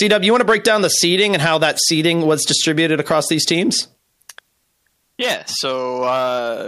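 No faults are audible anywhere in this recording.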